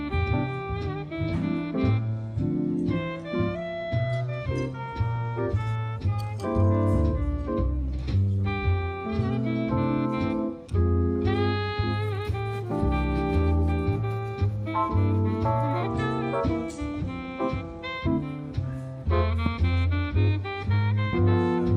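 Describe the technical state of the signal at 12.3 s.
At 12.3 s the signal is intact, with no dropout, click, distortion or other fault audible at that moment.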